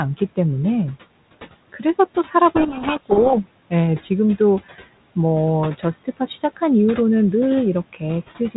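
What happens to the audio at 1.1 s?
Nothing goes wrong at 1.1 s: the speech passes intact there, with no dropout, glitch or other fault at that moment.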